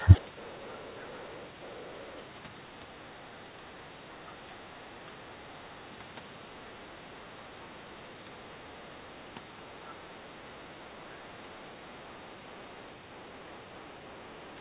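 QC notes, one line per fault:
0.0–0.2 s, speech suppressed in double talk: the opening dips by around 15 dB, likely the echo canceller ducking both sides while they overlap.
0.21–1.42 s, 1.63–2.18 s, 9.88–9.93 s, 13.58–13.62 s, other side's voice leaking through: faint far-end scraps sit roughly 35–40 dB under the speech, likely echo the canceller didn't fully remove.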